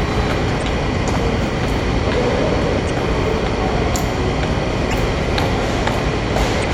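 A sound recording with damaged data in a compressed stream: brief garbled blips of about 40 ms at 0.59, 2.86, 4.90 and 6.60 s, where the decoder misreads corrupt frames and resyncs.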